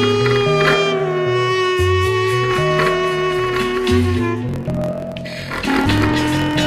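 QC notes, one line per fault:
4.47 to 6.67 s, block size mismatch (truncated): from here to the end a steady buzz at about 43.1 Hz sits under the sound, and everything runs 1.12 times too fast while the timbre stays the same. One stage is writing blocks about 12% longer than the next one reads, so the tail of every block gets chopped off. The buzz is those cuts repeating, and the rate fits a 1024-sample read size.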